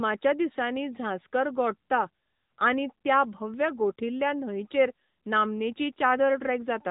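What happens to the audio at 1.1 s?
At 1.1 s, as throughout, the speech carries AMR narrowband mobile codec damage: a spectrogram shows nothing above 3.8 kHz, and plainly audible buzzy, synthetic vocal-tract modelling comes from coding at 10.2 kbps.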